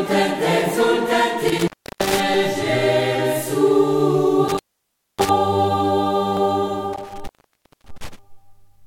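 At 1.48 to 2.20 s and 4.48 to 5.29 s, an intermittent contact opens the line. The music cuts out for 0.33 s, then 0.60 s, with crackle and faint hiss.

At 6.37 s, a jump in the music points to a dropped buffer. A likely overrun discards around 30 ms and splices the edges.

From 6.93 to 8.19 s, the contact opens again for 0.57 s.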